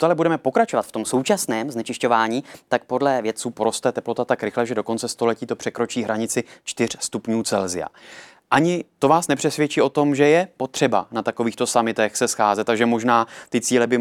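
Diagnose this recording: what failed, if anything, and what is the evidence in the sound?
Wrong sample rate at playback, 0.72 to 3.4 s: speech runs 1.09 times fast and 1.47 semitones sharp, which fits 44.1 kHz audio clocked out at 48 kHz.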